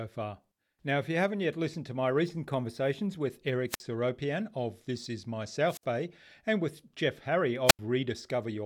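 The radio link from an analogue FM microphone fades three times, and each time the receiver's squelch cuts the output. The result is a wireless microphone squelch dropout: a brief rise of hiss, then a near-silent hole before the voice returns. The first runs from 3.68 to 3.80 s with a mute of about 51 ms. The second spans 5.67 to 5.84 s with a 61 ms mute, and the third spans 7.67 to 7.79 s with an 83 ms mute.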